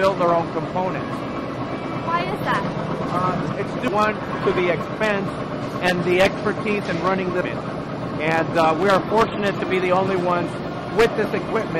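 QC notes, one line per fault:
3.88 s and 7.41 s: damaged data in a compressed stream. Two brief blips where corrupted bytes in the encoded data leave the decoder unable to read those frames correctly, so it loses sync before locking onto the next valid frame header.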